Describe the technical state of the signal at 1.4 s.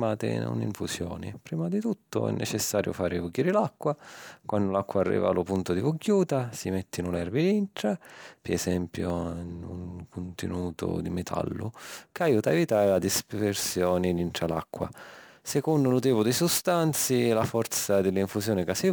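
At 1.4 s the speech signal is intact, with no dropout, distortion, glitch or other technical fault.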